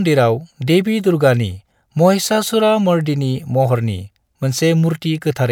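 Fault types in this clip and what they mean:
No faults can be heard anywhere in this speech recording.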